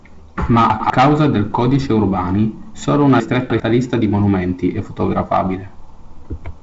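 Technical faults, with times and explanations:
0.7 to 0.9 s, chunks out of order: two adjacent 100 ms blocks play in swapped order, so the sound jumps ahead, then steps back. Nothing is missing, but there are three hard joins, and the brief stretch sounds jumbled.
3.2 to 3.6 s, chunks out of order: one 100 ms block arrives three blocks late and plays after the material that should follow it. The result is a longer garbled moment with three hard joins, heard against the G.722 wideband band limit near 7.7 kHz.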